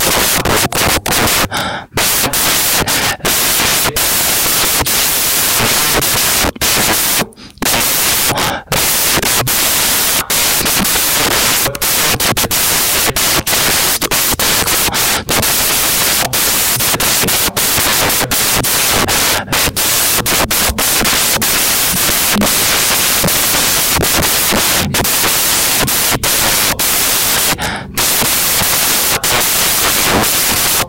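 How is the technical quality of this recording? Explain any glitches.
The technical quality is poor, because one fault runs through the entire speech clip. Throughout, the samples are built from the wrong bytes. The reader misaligns or swaps each sample's bytes, so the fast-changing low bits become the large part of every value. The result is loud, harsh broadband noise, close to white on the louder passages. That sets it apart from ordinary background hiss, which would stay at a constant level.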